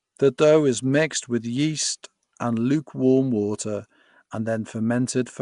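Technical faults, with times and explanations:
Throughout: Nellymoser compression damage, plainly audible across the whole speech clip. The speech carries a rough, hissy halo and a smeared, underwater quality, and nothing remains above 10.6 kHz. The likely cause is Flash's Nellymoser Asao codec, which codes 256-sample blocks coarsely and fills weak bands with noise. The cut-off fits a rate near 44 kbps. A spectrogram shows a hard ceiling at 10.6 kHz and grainy, blotchy noise between the harmonics.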